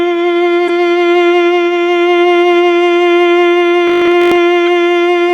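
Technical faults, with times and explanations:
0.68–0.70 s and 4.66 s, corrupt frame decoded: Two short bursts break into the music. The first lasts about 20 ms and covers roughly two compressed frames. The second is a single-frame blip. Bits inside those frames were damaged, but the decoder played them anyway. Misread gains and codes put energy at frequencies that don't belong to the music, so each damaged frame comes out as a brief squeak or spray of noise.
3.88–4.38 s, robotic sound from repeated short buffers: For half a second the music turns into a rigid, metallic buzz at 50 Hz. That pitch comes from one short slice of audio being replayed every 20 ms. The likely cause is new audio arriving too slowly, so the player kept refilling the gap with its last buffer. Roughly half the material in this stretch is repeats, and the real audio it replaced is skipped.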